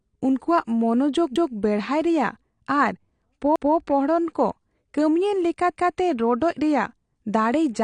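Throughout the speech the band stops at 9.9 kHz, and the remaining spectrum sounds dull and smeared, with a fizzy, warbling texture on sibilants and sustained vowels. This is plainly audible AAC compression damage, likely from an AAC-LC encode at a low rate, around 32 kbps. At that budget the encoder drops the top band and coarsely quantises what is left against its hearing model.

Overlapping chunks appear at 1.36–1.56 s, just before "ᱵᱮᱲᱦᱟᱨ ᱨᱮᱭᱟᱜ"; at 3.56–3.76 s; and at 5.76–5.96 s, between "ᱠᱚ ᱠᱟᱹᱢᱤᱭᱟᱱ" and "ᱨᱚᱰᱚᱡᱽ ᱨᱮᱭᱟᱜ". The audio was handled in 2.0 s chunks, each starting 200 ms before the previous one ended, so 200 ms of sound plays twice at every join. Each repeat is heard as a stutter or click at the seam, recurring every 2.2 s.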